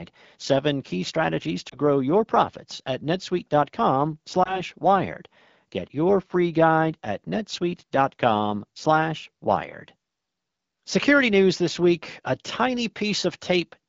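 Speech clip with two lost AMR speech frames, each a single missing 20 ms frame. The decoder bridges each gap by repeating the last good frame's settings at reduced gain. One occurs at 1.70 to 1.75 s, between "seven key strategies" and "grow your profits at". The other is at 4.44 to 4.62 s. The wideband sound fits AMR-WB at about 12.65 kbit/s.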